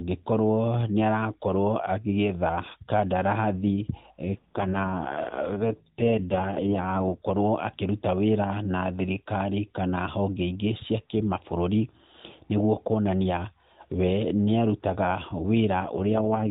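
This is speech over a narrowband mobile path with an AMR rate drop twice, at 4.24–7.21 s and again at 15.80–16.50 s. The band stays put and nothing drops out, but the voice goes rough and buzzy, which fits the codec falling from 12.2 to 4.75 kbps on a weak link.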